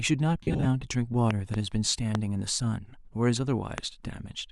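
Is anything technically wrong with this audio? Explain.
Yes. The speech has two distinct technical faults.

Lost LE Audio frames, 0.42 to 0.66 s: about 158 ms of frames go missing, scattered across 225 ms, with the longest gap around 50 ms. The LC3 decoder covers each gap by replaying the previous spectrum with scrambled phase. Unlike a plain dropout to silence, the speech smears into a brief noisy, hissy blur.

Loud pops: a pair between 1.31 and 1.56 s, then single pops at 2.15 to 2.17 s and 3.78 to 3.80 s, each peaking about 15 dB above the speech. They are likely voltage spikes from a switch, static discharge or a driver glitch. Each pop is a sharp isolated click, unlike clipping, and the speech continues unbroken beneath it.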